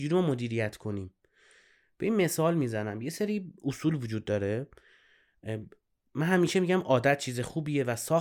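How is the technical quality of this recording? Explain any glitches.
No technical faults are audible in this speech recording.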